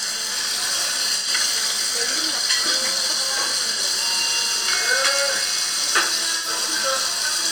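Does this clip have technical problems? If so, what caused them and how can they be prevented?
Yes. AAC frame loss with concealment smears the sound at 1.16–1.28 s, 3.72–3.79 s and 6.36–6.48 s. The decoder patched roughly 85, 43 and 85 ms gaps, consistent with two, one and two lost frames, by reusing the last good spectrum. On a spectrogram these appear as blurred, noisy vertical bands. Error-resilient transport with retransmission or forward error correction would prevent the losses.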